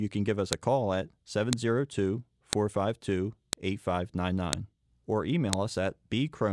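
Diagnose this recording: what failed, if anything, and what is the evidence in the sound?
Looks like a storage or streaming join fault: file header played as audio. Sharp clicks at 0.53, 1.53, 2.53, 3.53, 4.53 and 5.53 s, the first between "can give us" and "a call at", spaced exactly 1 s apart. Each 1-second WAV piece kept its header, and those bytes play as a snap.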